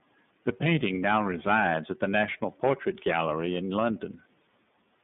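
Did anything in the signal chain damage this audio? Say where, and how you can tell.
Yes. Throughout, the speech sounds dull, rough and faintly synthetic, cut off above 3.6 kHz. This is iLBC codec damage, with each frame coded independently, which fits 30 ms frames.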